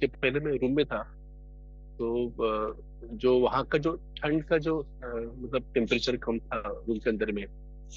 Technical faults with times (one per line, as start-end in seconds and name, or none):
0.00-7.96 mains hum